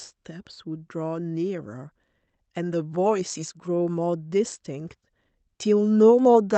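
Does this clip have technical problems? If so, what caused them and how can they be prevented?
No, nothing in this speech clip stood out as a technical problem on listening, so there is nothing here that needs preventing.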